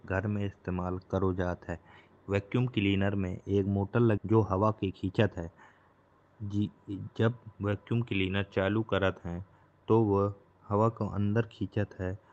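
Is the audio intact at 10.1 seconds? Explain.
Yes, the speech at 10.1 seconds is intact, with no dropout, glitch or other fault at that moment.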